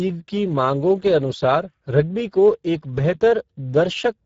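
From start to finish the speech carries Speex codec damage. Too few bits for the excitation leave it hoarse and buzzy, which fits a rate near 10 kbps. Nothing sounds above 7.6 kHz. The grainy, noise-filled roughness, rather than warbling swirls, marks it apart from MP3-style artefacts.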